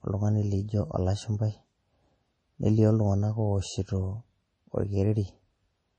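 MP3 compression damage runs throughout the speech. Nothing sounds above 10.1 kHz, and the audio turns watery and swirly, with smeared consonants, likely from encoding at around 32 kbps.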